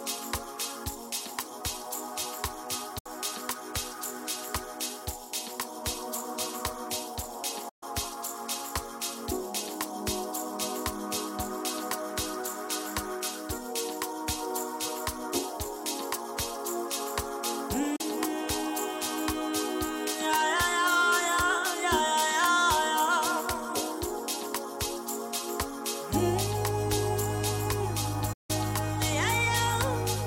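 The audio has four digital broadcast dropouts, at 2.98–3.06 s, 7.69–7.83 s, 17.96–18.01 s and 28.33–28.50 s. Each is a hard mute entered and left through a fade of about 8 ms, with the programme lost for 32 to 160 ms. The gaps fit whole frames of about 32 ms failing at the receiver. Unlike network packet loss, nothing fills the holes with repeated or smeared sound. The output is plain silence.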